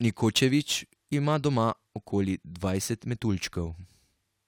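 Somewhere in the chain, this speech was resampled crudely, by simply repeating the nearest sample with no filtering, in a step whose ratio points to a 44.1 kHz to 48 kHz conversion. The duplicated samples fall in a fixed repeating pattern, so the error forms shifted, inharmonic copies of the speech, sitting roughly 25 dB below it. Throughout the clip this crude rate conversion is heard as a gritty, inharmonic fizz that tracks the louder and brighter sounds.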